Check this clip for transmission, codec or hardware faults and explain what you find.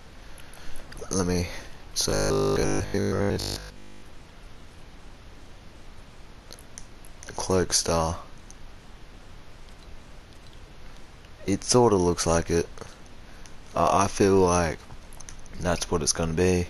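One fault is present. Robotic sound from repeated short buffers runs from 2.10 to 4.02 s. Most of that stretch is short 20 ms slices replayed over and over, likely because new audio arrived too seldom. Its 50 Hz repeat rate produces a rigid, metallic buzz that only roughly tracks the original.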